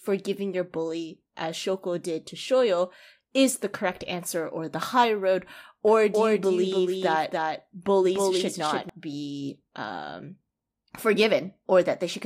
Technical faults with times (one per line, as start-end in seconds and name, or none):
5.87-8.89 doubled audio track